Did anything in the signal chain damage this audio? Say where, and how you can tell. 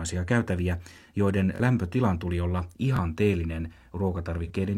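Yes. At the driver or buffer stage there is a repeated buffer. At 1.56 to 1.60 s a piece of about 21 ms plays three times, and at 2.97 to 2.99 s one plays twice, each with hard joins. That length fits a 1024-sample buffer. Late data made the device replay its last block, losing roughly 40 ms and 20 ms.

At the codec stage there is AAC frame loss with concealment. At 4.45 to 4.50 s a 42.7 ms patch sounds smeared and noisy. One AAC frame was lost, and the decoder filled it from the previous good spectrum, keeping the energy but not the real detail.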